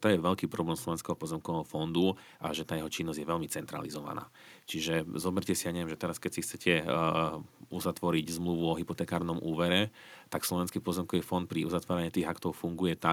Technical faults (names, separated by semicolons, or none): none